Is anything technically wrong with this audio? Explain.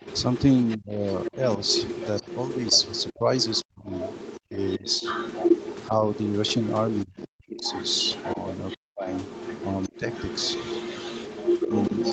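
Yes. Throughout the clip a second voice sits about 10 dB under the speech; this is the other side's voice leaking through, likely because the echo canceller left loudspeaker pickup in the microphone signal. The speech also dips or drops out in pieces at 0.77–1.36, 3.17–5.03, 5.88–6.04, 7.04–7.7, 8.77–9.07 and 9.88–9.99 s, from a slight dip to near silence. This is speech suppressed in double talk, likely the canceller turning everything down while both sides spoke at once.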